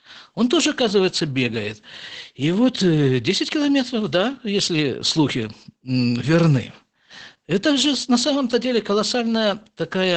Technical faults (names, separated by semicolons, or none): Opus voice compression